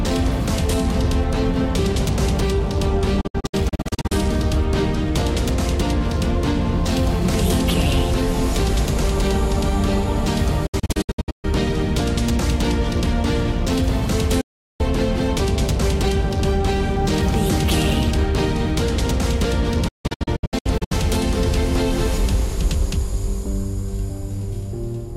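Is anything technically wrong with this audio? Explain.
Yes. Digital broadcast dropouts occur at 3.21–4.12 s, 10.66–11.45 s, 14.41–14.81 s and 19.88–20.92 s. The receiver lost valid frames and muted, fading out in about 8 ms. Most spans break into several short silent holes, and the 14.41 s one forms a single gap. Unlike analogue fading or concealed packet loss, the silence is clean and abrupt, with nothing smeared or repeated, and that sound is gone.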